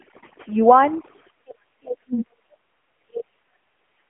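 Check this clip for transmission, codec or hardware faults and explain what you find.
Three faults are present in this speech: two run the whole way through, and a dip in the voice recurs later on.

Overdone noise removal, throughout: the background falls to near silence scattered with twinkling specks. A noise reducer set too aggressively is switching off individual frequency bands whenever they sit close to its noise estimate, and the softer parts of the voice are removed along with the noise.

AMR narrowband mobile codec, throughout: the voice is buzzy and synthetic, and nothing comes through above 3.5 kHz, within a roughly 250 Hz to 3.4 kHz phone band. Heavy damage of this kind points to AMR-NB at a low rate, around 6.7 kbps, where a few pulses per subframe drive a vocal-tract model.

Speech suppressed in double talk, from 1.43 to 3.57 s and again from 3.87 to 4.04 s: the voice sinks, by about 40 dB at worst in the first stretch and about 30 dB in the second, and thins out or drops away. 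The likely cause is an echo canceller that cannot separate this talker from the far side's echo and turns both down.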